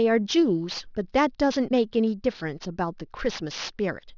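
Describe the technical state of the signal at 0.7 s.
Gritty, metallic sibilance runs through 0.7 s and the whole clip: aliasing, with content above 6 kHz folding back as false tones around 20 dB down, pointing to unfiltered downsampling to 12 kHz.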